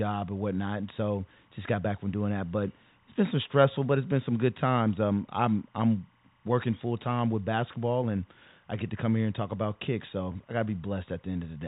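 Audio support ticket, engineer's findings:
Timecode bleed throughout. Faint chirping warble switching near 1 and 2 kHz, roughly 40 dB down, behind the telephone-band speech. The rhythm fits 25 fps linear timecode leaking from an adjacent track or cable.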